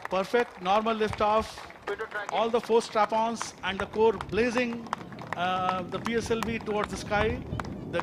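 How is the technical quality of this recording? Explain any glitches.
The recording has no technical glitches to report. No fault can be heard at any point in the audio.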